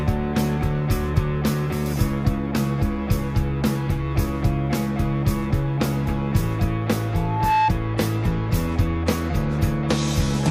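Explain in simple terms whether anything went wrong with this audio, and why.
Two things went wrong. At 7.15 s a microphone started picking up the loudspeaker it was feeding, causing loudspeaker feedback squeal: one tone near 869 Hz fed on itself, swelling within about 0.4 seconds into a piercing whistle that stopped at 7.73 s.

Then, from 7.85 s to the end, the stream switched to a lower-bitrate version when the connection slowed. At that point the sound abruptly becomes rougher, with more compression artefacts, with no gap or dropout marking the change.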